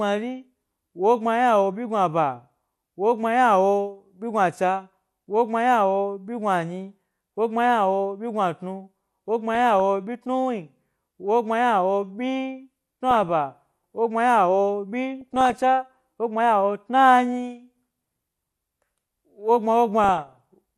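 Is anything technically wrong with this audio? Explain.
Yes. The speech carries MP2 compression damage throughout, and four short bursts of DAB burbling sit on top of it.

MP2 compression is plainly audible across the whole clip. It is likely caused by MPEG Layer II encoding at a low rate, and the dullness fits something around 80 kbps. The encoder splits the signal into 32 sub-bands and shares out too few bits, so upper bands switch off and flicker back while the remaining ones are coarsely quantised. The result is a muffled top end with a gurgling, granular edge. Unlike the burbling, it is steady and never stops.

DAB burbling occurs at 9.55–9.80 s, 13.11–13.29 s, 15.21–15.60 s (between "wogbma ynawo" and "wogbma ynawo") and 20.04–20.38 s. Residual bit errors, a fraction of a percent, slip past error correction into the MP2 stream. Corrupted samples put short blips of noise into single sub-bands, and corrupted scale factors make sub-bands jump in level for up to a frame. 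Unlike a dropout or a mute, the sound keeps going underneath the brief bursts.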